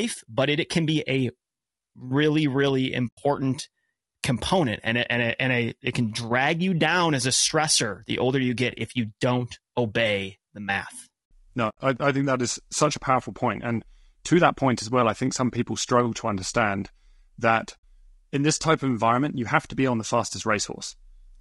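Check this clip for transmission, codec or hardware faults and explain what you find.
Two problems stand out in this speech: a constant coding roughness and three short holes where the sound drops away.

Throughout, the speech sounds rough and grainy. There's a noisy fill between the harmonics and a top end that's dull or synthetic. That's likely low-delay AAC compression of the kind used in video calls, and the damage points to a low bitrate, around 32 kbps. At this bitrate there aren't enough bits to code the spectrum cleanly.

There's also AAC frame loss with muting, in three places. From 3.07 to 3.18 s, right after "really really", about 100 ms goes silent. From 11.69 to 11.77 s, just before "I I think that", about 80 ms drops out. From 17.78 to 17.84 s, between "struggle to understand that" and "in this type of", about 60 ms is lost. In each case whole frames didn't arrive, and the decoder zeroed them. 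The overlapping windows fade the sound out and back in, so these are soft-edged gaps.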